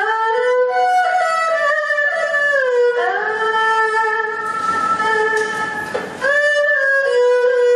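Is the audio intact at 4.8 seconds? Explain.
No. At 4.8 seconds, as across the whole clip, there is gain pumping: the input gain was likely set far too high, so a fast limiter clamps down on each loud sound. The gain swings by roughly 20 dB under loud moments, leaving the sound squashed.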